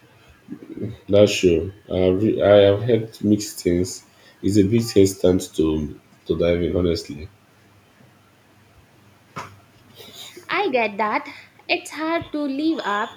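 No technical faults are audible in the speech.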